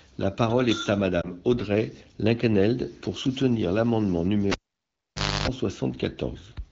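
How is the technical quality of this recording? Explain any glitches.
The recording has two glitches over a light AMR wideband (HD Voice) coding layer at 12.65 kbit/s, which keeps the speech clear but band-limited.

From 1.22 to 1.31 s, just after "parole est à", there is a brief warble and dip. A single 20 ms frame failed its checksum, so the AMR decoder filled the gap by repeating the previous pitch and vocal-tract settings at reduced gain.

From 4.52 to 5.48 s, right after "pour soutenir l’amendement", a pop cuts the sound to near silence for about 0.9 s. A 50 Hz mains buzz follows for about 0.3 s, then a second pop brings the audio back. This is the cable being pulled and plugged in: the buzz comes while only the plug tip makes contact.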